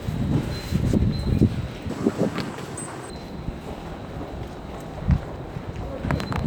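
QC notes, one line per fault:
1.90–3.10 s, section at the wrong speed: sound runs twice as fast and nearly an octave higher, likely a clock mismatch; spectrogram partials jump upward.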